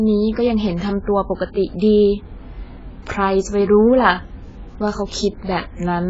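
Throughout, heavy AAC compression is the likely cause. Nothing survives above 7.7 kHz, so the speech sounds dull and smeared, with fizzy, warbling sibilants.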